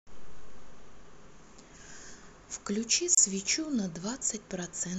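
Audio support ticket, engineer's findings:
Brief dropout in speech at 3.15–3.17 s, 28 ms gap with smeared edges; speech resumes where it stopped. Gap at a join of encoded pieces: segments encoded separately, concatenated untrimmed, encoder start delay and final-frame padding left in.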